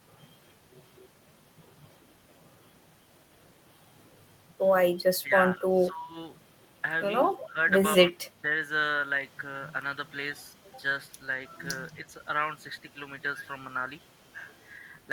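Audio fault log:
5.23–5.32 s, 5.56–6.17 s, 7.44–7.58 s: speech suppressed in double talk. Speech dips by roughly 10 to 15 dB, likely an echo canceller attenuating the talker while the far end spoke simultaneously.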